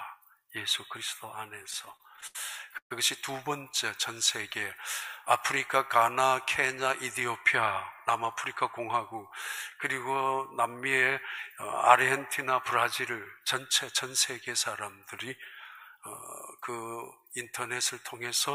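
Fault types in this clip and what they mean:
Repeated stalls (stutter): Late packets kept emptying the jitter buffer. From 1.62 to 2.36 s the sound halts ten times, the longest gap 78 ms. The last sound is stretched over about 184 ms, a quarter of that span. Nothing is lost, but it drags.
Call audio freeze: At 2.78 s the sound stops for 130 ms. The last sound carries on briefly, then drops to silence for 90 ms. Playback resumes where it stopped, with nothing lost. Packets held up in transit are the likely cause.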